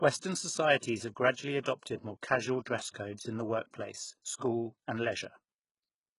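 HE-AAC compression affects the whole speech clip, from start to finish. The treble sounds synthetic: s sounds come out gritty and lispy, the upper harmonics don't line up with the lower ones, and nothing is present above 11.1 kHz. The likely cause is spectral band replication, which codes only the lower spectrum and rebuilds the top by copying lower bands upward under a coarse envelope. The damage is heavy, which fits a very low bitrate around 12 kbps.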